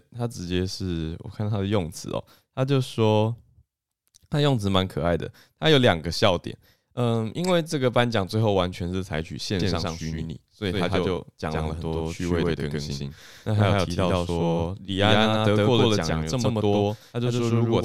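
A speech recording that, from 9.60 s to the end, carries a doubled audio track: a second full-band copy trails the original by roughly a tenth of a second at about equal loudness, with no decay or room colour, so every syllable gets a hard, flat slap. It switches on abruptly. On a spectrogram each onset and harmonic stack appears twice, evenly offset. The waveform shows repeated transients. The likely cause is a second, slower capture path being mixed in.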